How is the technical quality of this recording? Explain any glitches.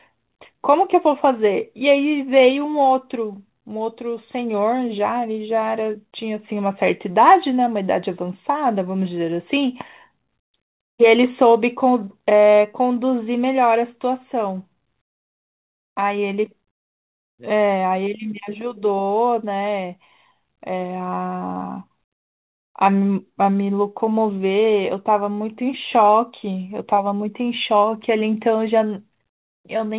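The speech has a faintly uneven, stretched tempo throughout, with small stutters scattered across it. The band stops around 4 kHz, as expected from a G.711 mu-law call path.

Clock drift between sender and receiver runs the whole way through. Playback feels slightly slow and unsteady rather than broken. The sender's clock is running roughly 4 percent slower than the receiver's, so audio arrives a little too slowly to keep the jitter buffer full. It keeps sinking toward empty, and the receiver has to compensate continuously.

Repeated timing corrections run from 0.1 to 29.85 s as irregularly spaced hiccups, tiny doublings that make phrases drag by a hair. To keep the draining buffer from running dry, the receiver repeatedly repeats short slices of audio, effectively playing the speech at 96 percent speed. Every edit pushes the same way, lengthening the audio, and together they add about a second and a half across the clip.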